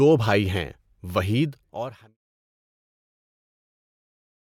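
Speech, with no technical faults to report.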